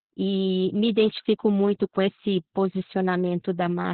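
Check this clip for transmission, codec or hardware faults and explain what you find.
The clip has one codec fault running through the whole clip.

Opus voice compression, throughout: the speech has been squeezed through Opus's SILK linear-prediction coder in narrowband mode, so nothing survives above about 4.2 kHz. The coarse excitation coding and the muffled, hoarse, slightly robotic character suggest a very low rate, around 8 kbps, with heavy damage. Sibilants and consonant detail are dulled, and voiced sounds take on a buzzy, synthetic edge.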